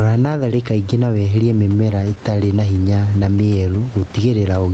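Throughout the speech, the input gain is likely set far too high, so a fast limiter or compressor keeps clamping down on each loud syllable and releasing in the gaps. That produces gain pumping, with the level swinging by around 10 dB. Loud and quiet passages sit unnaturally close in level, and the speech sounds squashed and breathing.

From 1.57 to 2.49 s, packets arrive late or too slowly to keep up with playback, so the jitter buffer repeatedly runs dry. Each time, the receiver stretches the last bit of sound to bridge the wait, about eight very short fills of no more than 10 ms each, 79 ms in all. Nothing is lost, but this repeated stall (stutter) makes the passage drag and catch in small hitches.

Between 3.42 and 4.00 s, a jitter buffer slow-down occurs. The buffer is short of reserve, so the receiver repeats single pitch periods and slivers of pause to rebuild it, adding 68 ms. The speech plays at about 90% speed while keeping its pitch, so sounds are drawn out. 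The Opus call path cuts the top end off at 8 kHz throughout.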